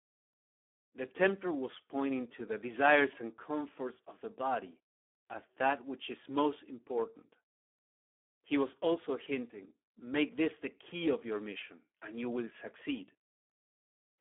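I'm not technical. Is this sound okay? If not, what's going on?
No. Throughout, the speech was squeezed through the Speex codec at a very low quality setting, over a phone-style line passing roughly 250 Hz to 3.4 kHz. So it sounds hoarse and noisy from start to finish, with nothing above 3.7 kHz.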